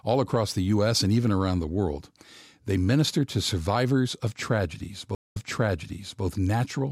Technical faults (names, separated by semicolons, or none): stream reconnect